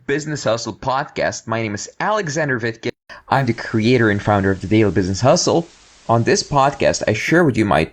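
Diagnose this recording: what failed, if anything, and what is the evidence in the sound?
From 0.0 to 3.10 s the audio is band-limited, with a noise floor roughly 50 dB down, and a level a few dB lower, ending in a 200 ms gap. The likely cause is an input switched to a poorer device at the driver stage. A spectrogram shows a flat ceiling and a blank column at the gap.

From 3.31 to 7.32 s, digital radio blending to analogue FM in the reception chain cross-fades over 189 ms. Hiss rises to roughly 30 dB below the signal, and the level drops about 2 dB. The waveform shows a shallow step, and the spectrogram a grey haze.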